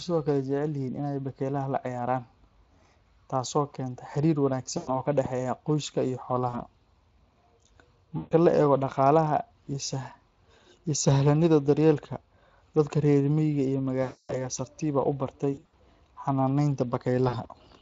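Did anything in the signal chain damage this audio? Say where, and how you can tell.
Yes. At the codec stage the whole clip carries Speex codec damage. At about 20.6 kbps the CELP coder has too few bits for a clean excitation, so the speech sounds noisy and hoarse, with a rough, synthetic grain. The damage is plainly audible from start to finish, not tied to any one moment.

Network-side, there is VoIP packet loss concealed by the speech codec at 4.77 to 5.0 s, 6.49 to 6.59 s, 8.17 to 8.34 s, 14.03 to 14.38 s, 15.53 to 15.75 s and 17.29 to 17.48 s. Each gap is bridged by the decoder repeating its last pitch and filter at falling gain, heard as a buzzy or coloured smear. The longest, near 14.0 s, spans about 260 ms. The last two are broken patches rather than single runs. The voice stays weak briefly after each gap while the decoder recovers.

In the analogue or driver path, a single loud pop lands at 5.25 to 5.28 s, peaking about 10 dB above the speech, which continues underneath. 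A sharp transient of about 20 ms on top of continuing speech like this is likely a voltage step from a plug, switch or static discharge, not a codec event.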